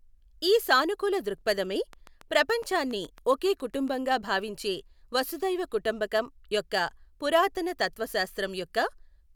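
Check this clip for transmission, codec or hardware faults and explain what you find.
One fault is present. From 1.93 to 3.89 s, between "ఈ సానుకూల దృక్ఫధమే" and "భావించే వసుధైవ కుటుంబకం యొక్క", a regular ticking of about fifteen similar pops runs over the speech at 7.2 per second, roughly as loud as the speech itself. This train of clicks is likely caused by repeated pulses from interfering nearby equipment or a faulty connection or power supply.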